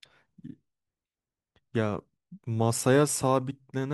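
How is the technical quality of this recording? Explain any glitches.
No glitches or faults can be heard in this recording.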